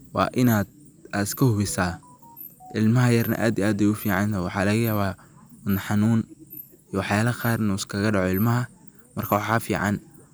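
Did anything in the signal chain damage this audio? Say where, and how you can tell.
Yes. There is hard clipping in the speech from 9.32 to 9.56 s, near the end of the clip. The loudest stretch there takes on a brittle, crackly edge. The signal was driven about 3 dB past what one stage could pass, most plausibly the converter input or a fixed-point sample-format conversion. Peaks above that ceiling were sliced flat. Those flat tops add harmonics high in the spectrum, and that is the crackle you hear.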